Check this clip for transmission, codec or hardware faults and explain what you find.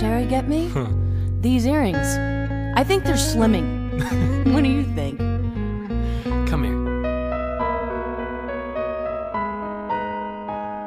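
One fault stands out, a time-stretched section from 7.03 s to the end at 10.86 s. The pace abruptly drops to about 0.63 times normal while pitch holds steady, likely from software lengthening the passage by repeating short pieces, leaving the audio dragging.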